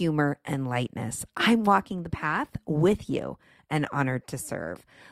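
At 1.89 s the adaptive stream switches to a lower bitrate and stays there to the end, as the connection slowed. The speech abruptly picks up more codec artefacts, with no gap, which fits an Opus stream dropping from 64 to 24 kbit/s.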